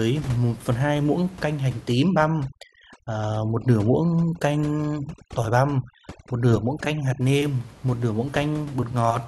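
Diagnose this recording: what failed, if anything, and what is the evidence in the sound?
The failure is overdone noise removal in the call processing stage. From 1.92 s to 7.21 s the background drops and breaks up into twinkling specks. The suppressor is set too hard. Any frequency band that sits close to its noise estimate is pushed down or shut off. The room noise lies only about 20 dB below the speech, so the quieter parts of the speech get caught and removed with it.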